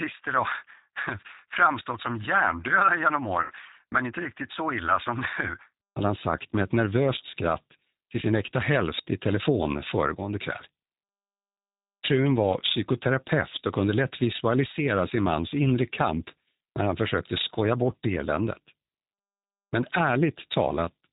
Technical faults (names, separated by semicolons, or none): G.729 codec; VoIP packet loss concealed by the speech codec